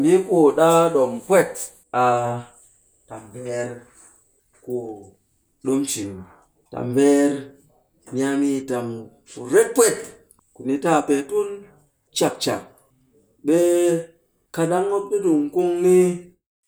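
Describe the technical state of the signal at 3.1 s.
At 3.1 s the signal is intact, with no technical fault present at that moment.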